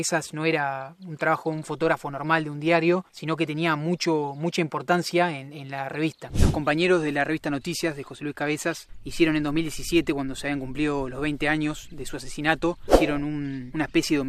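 No technical faults can be heard anywhere in the recording.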